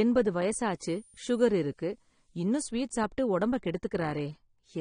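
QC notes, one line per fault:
Throughout: AAC compression, likely at a low bitrate, which fits around 32 kbps AAC-LC. The band stops near 9.7 kHz and the speech sounds dull and smeared, with plainly audible warbling and fizz on sibilants, because coarse frame-by-frame quantisation leaves spectral holes and crudely refilled bands.
0.69 to 2.71 s: switching supply whistle. A faint high tone, drifting between about 9.2 and 10.3 kHz and sitting roughly 30 dB below the speech, comes from a switching power supply running in an audible burst mode or beating with another. It ends just before "சாப்பிட்டு உடம்ப".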